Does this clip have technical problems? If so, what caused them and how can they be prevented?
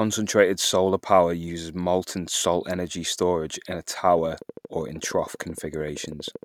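Yes. Sample clock jitter runs through the whole recording: the converter clock wanders by around a microsecond, so sample timing errors add a faint hiss, around 40 dB below the speech, that thickens on loud and sibilant sounds and disappears in pauses. A stable, low-jitter clock source or a better converter prevents this.

A train of clicks starts at 4.18 s, just after "energy storage in a", and lasts to 6.44 s. About thirty similar pulses arrive at a regular 12.9 per second, peaking a few dB above the speech and ticking through gaps too. The likely cause is interference from nearby equipment or a faulty connection or power supply. Moving or shielding nearby electronics and checking connections and the power supply prevents this.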